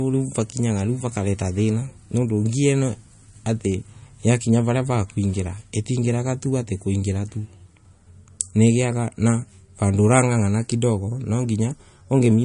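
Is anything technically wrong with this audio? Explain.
Yes. Throughout the speech there is a watery, swirling quality, with metallic chirps on s sounds and softened, smeared consonant attacks, and nothing is heard above 10.6 kHz. This is likely MP3 compression, plainly audible here and consistent with a low bitrate of about 40 kbps. Short of bits, the encoder cut the treble at that fixed frequency and zeroed weak frequency lines, which flicker on and off between frames and cause the swirl and chirps.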